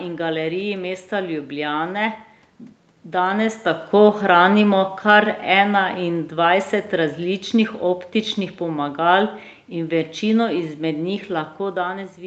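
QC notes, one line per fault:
3.27–8.11 s, automatic gain falling: the gain control judged the input too loud, or its background noise too strong, and eased it down by about 5 dB, so speech and background sink together before "pomagal in večino izmed".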